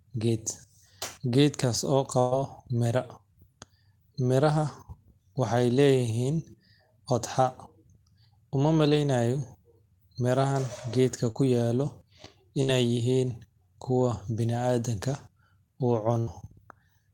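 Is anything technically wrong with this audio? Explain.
Yes. The speech has dropouts from lost network packets.

A burst of packet loss occurs at 2.19–2.34 s, 12.63–12.71 s and 16.19–16.30 s. The receiver extended the last sound for about 120 ms, 52 ms and 78 ms respectively, fading it as it went. This gives a held buzz or fading hiss, and then the speech jumps ahead past the missing stretch.

Short concealed packet loss occurs at 11.31–11.38 s. About 40 ms failed to arrive in time, and the decoder covered it with roughly 37 ms of continued sound before blending back in. The result is a brief smear or wobble in the speech.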